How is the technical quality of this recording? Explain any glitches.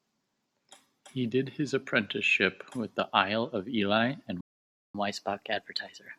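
The recording has two connected playback glitches near the end of the speech.

At 4.41 s a playback stall cuts the sound off mid-flow for about 0.54 s, until 4.95 s. The player likely ran short of buffered data or was blocked. The waveform drops to a flat line, and the spectrogram shows a blank vertical gap.

From 4.95 s to the end, catch-up at higher speed follows. The player resamples its backlog at 1.1 times normal speed, so the speech runs quicker and sits about one and a half semitones higher. On the spectrogram, the harmonics shift upward and the events are compressed in time.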